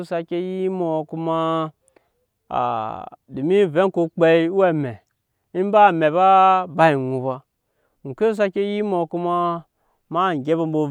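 Nothing technical goes wrong anywhere in this speech recording, so there's no fault to point to at any moment.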